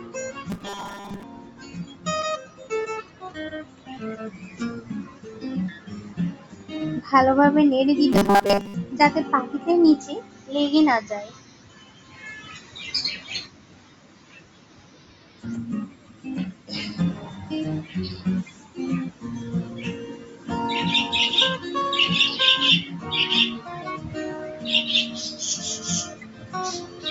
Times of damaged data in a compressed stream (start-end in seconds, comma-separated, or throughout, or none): none